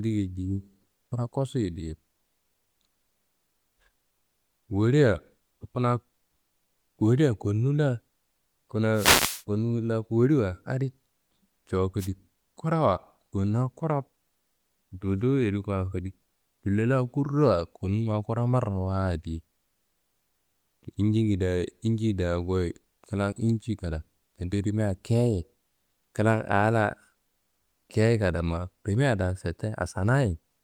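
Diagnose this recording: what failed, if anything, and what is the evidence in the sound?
Wireless microphone noise hit on the radio link: FM signal fades raised receiver static at 8.93–9.44 s, before "konu wolla woliwa adi", and 11.98–12.09 s, showing as broadband vertical spectrogram smears.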